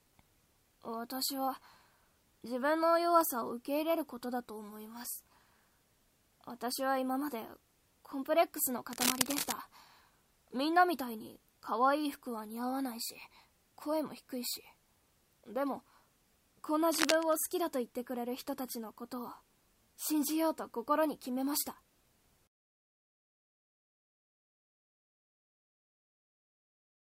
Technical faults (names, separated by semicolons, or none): cable scratch noise